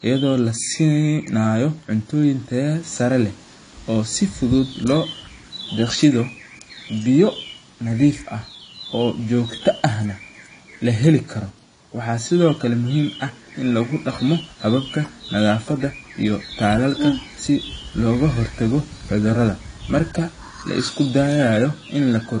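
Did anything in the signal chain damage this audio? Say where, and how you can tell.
Yes, at the codec stage, and the damage runs through the whole clip. The speech sounds dull and smeared, with a fizzy, warbling edge on sibilants and held sounds. On a spectrogram there is nothing above 9.8 kHz, where the top of the spectrum ends in a hard edge. This is likely AAC compression, which fits AAC-LC at a low bitrate near 32 kbps quantising each frame's frequency lines too coarsely.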